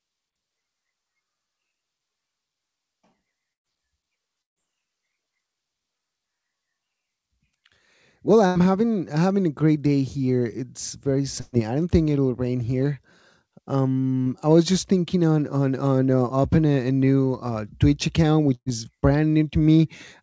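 At 3.53 s and 4.42 s the speech drops into brief dead silence of about 110 ms and 140 ms. At 8.46 s there is a roughly 90 ms gap. At 11.40 s a 120 ms stretch is replaced by a held, fading continuation of the preceding sound. At 18.55 s a similar fill trails into about 50 ms of silence. In each case the speech resumes with a short span missing. These are bursts of packet loss: consecutive packets arrived too late or not at all, and the receiver concealed the hole before skipping ahead. The call path itself carries nothing above 8 kHz, which fits a G.722 wideband codec.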